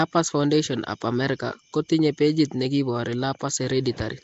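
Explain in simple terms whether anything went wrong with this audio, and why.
Throughout the speech, from start to finish, there's a rough, hissy haze around the voice and a smeared, underwater quality, and the top end is missing, with nothing above about 7.7 kHz. This is Nellymoser compression, likely from the old Flash microphone codec. It squeezes sound into small blocks with very few bits, so quieter parts of the sound get no detail at all and are replaced with noise, which creates that gritty halo.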